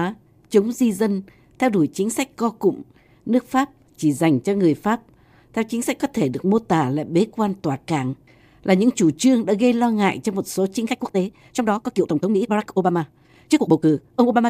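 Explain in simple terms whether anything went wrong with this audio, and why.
From 10.82 s to the end at 14.50 s, right after "ngại cho một số", the speech suddenly rushes ahead at about 1.74 times normal speed, while the pitch stays put. That's a time-stretched section, likely software squeezing the audio by dropping tiny slices.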